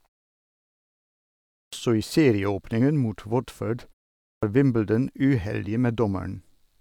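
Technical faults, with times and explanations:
1.64 s and 4.34 s, clipped start after a pause: the output device sleeps through the preceding silence (1.64 s, then 0.49 s) and wakes late, swallowing about 86 ms each time, so "i serieåpningen mot" and the later phrase begin abruptly.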